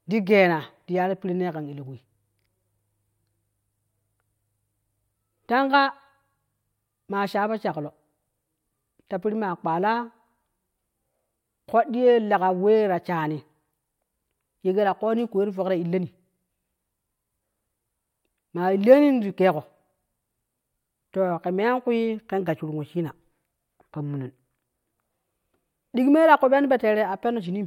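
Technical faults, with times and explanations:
26.36 to 27.66 s, periodic clock jitter: a rough, metallic edge on the speech, from the converter clock wobbling at about 100 Hz, adding sidebands around every component.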